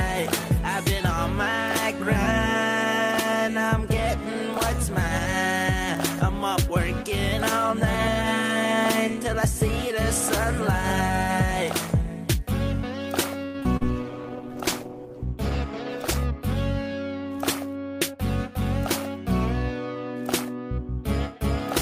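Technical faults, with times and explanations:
13.45–13.84 s, repeated packet loss (robotic sound): Four gaps arrive in quick succession, the longest about 87 ms. Each is patched by stretching the preceding sound, so about 41% of this short span is concealment rather than real signal, giving a choppy sound with pieces missing. On a spectrogram, frozen harmonic streaks alternate with abrupt breaks. The waveform shows repeated, oddly uniform cycles next to dips where roughly 100 ms of material simply vanishes.
14.02–16.26 s, call bitrate drop: Right after the dropouts the audio turns coarse and muffled for about 2.2 s. That fits the encoder cutting from around 48 kbps to about 15 kbps, which forces cruder coding and strips the treble. A spectrogram shows the upper band abruptly emptied above a hard ceiling, with patchy, smeared detail below it. The waveform envelope changes little, because the damage is spectral rather than in level.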